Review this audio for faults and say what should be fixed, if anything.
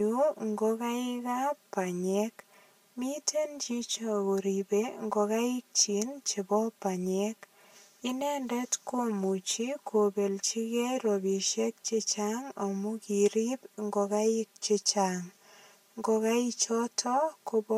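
Channel delay (comb filtering) runs through the whole speech clip. One channel arrives roughly 5 ms after the other, and when the pair is folded to mono the shared content cancels at evenly spaced frequencies. The first notch sits near 100 Hz, with further notches at roughly 200 Hz intervals above it. The result is a hollow, phasey, thinned tone that stays fixed for the full duration. Fix it by realigning the late channel or using a single channel. To prevent it, time-align both channels at capture or in the routing before any mono summing.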